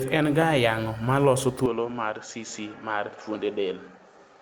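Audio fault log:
1.66–4.42 s, input switched to a poorer device: speech abruptly loses content above 7.6 kHz, drops about 5 dB and gains faint background noise, likely from a different microphone.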